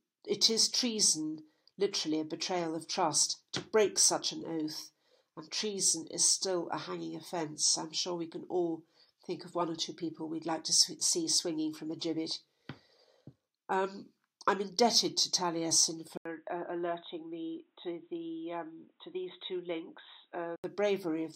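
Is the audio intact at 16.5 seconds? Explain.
No. From 16.17 to 20.64 s the sound turns dull and boxy, with nothing above 3.8 kHz, and drops a few decibels in level. The likely cause is that the input switched to a poorer device in mid-recording, one that passes a narrower band and adds its own faint noise floor, roughly 45 dB down. A spectrogram shows the upper band cut off flat at 3.8 kHz after an 80 ms gap, and the waveform steps down in amplitude.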